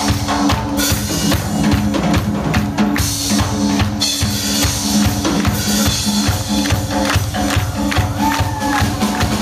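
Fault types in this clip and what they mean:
Gain pumping: The gain drops under each loud sound, a swing of about 10 dB. Loud and soft parts sit close in level, and the whole clip sounds squashed. The likely cause is gain set far too high, with a fast limiter pulling it down.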